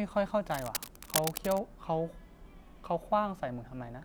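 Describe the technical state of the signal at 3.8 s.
At 3.8 s the signal is intact, with no audible fault at that moment.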